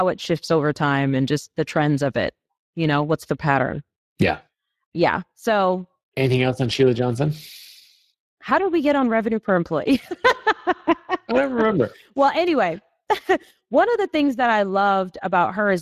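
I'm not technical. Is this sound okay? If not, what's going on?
No. Speex codec damage runs through the whole clip, from start to finish. This older speech compression squeezes the voice into very little data, keeping only a rough outline of it, which leaves the speech sounding plainly noisy and hoarse throughout.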